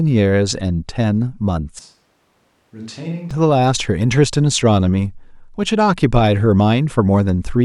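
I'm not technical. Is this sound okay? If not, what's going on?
No. From 1.79 to 3.31 s there is a switch to a distant microphone. The speech suddenly turns hollow, roomy and thin, quieter and with more background noise, likely because the close mic dropped out. Unlike a simple volume dip, the tone itself changes, then snaps back.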